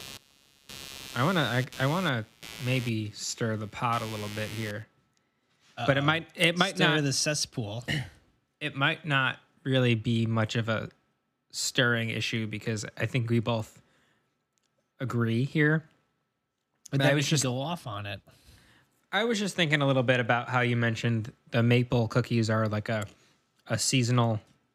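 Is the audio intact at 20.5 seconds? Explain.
Yes, at 20.5 seconds the speech plays through intact, with no dropout, click, distortion or other fault at that moment.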